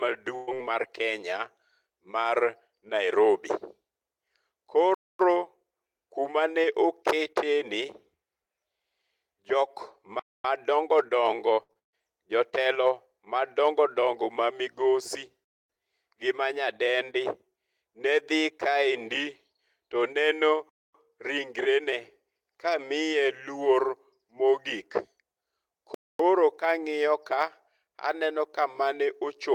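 At 0.35 s the speech hits a burst of packet loss lasting until 0.49 s. About 120 ms of audio never arrived, and the receiver filled roughly 118 ms of that by stretching the last sound and letting it decay, so a brief held buzz or fading hiss replaces the missing stretch before the speech jumps ahead. On a spectrogram the harmonics flatten into a frozen, dimming band. The waveform shows a smooth, repetitive decaying segment instead of normal variation.

At 4.94 s the first gap between chunks appears. The stream seems to arrive in 5-second chunks, and at each join 250 ms of silence is inserted without losing any speech, so the talk simply stops and restarts abruptly. Between 11.53 and 11.95 s, repeated packet loss gives a choppy, robotic sound. Four separate dropouts occur, the longest 138 ms, and about 61 percent of that span is concealment. Each patch loops the last fragment, which gives a stuttering texture with pieces missing. 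A spectrogram shows a sequence of smeared, frozen blocks broken by abrupt jumps, and the waveform alternates between decaying repeats and resumed speech.

The chunk gaps continue at 10.19, 15.44, 20.69 and 25.94 s, each 250 ms long. On the waveform they appear as flat, silent stretches with hard edges at both ends. On a spectrogram they are clean vertical bands of empty space at regular intervals.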